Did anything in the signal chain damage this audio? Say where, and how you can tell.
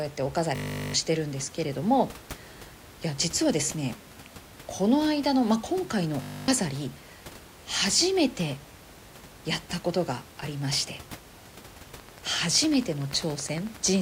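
Yes. At the driver or buffer stage, the system hung twice while the hardware kept replaying its ring buffer, producing a system hang loop. From 0.56 to 0.94 s and from 6.22 to 6.48 s, a 20 ms slice repeats at 50 Hz, heard as a steady buzz. The length fits a 20 ms buffer, and roughly 0.4 s and 0.3 s of speech are lost.

From 12.00 to 13.97 s, a train of clicks runs at about 10.7 per second with regular spacing. That is around 20 similar pops peaking about 5 dB above the speech, ticking audibly even in the pauses. This most likely comes from electrical interference in the analogue wiring or a struggling interface.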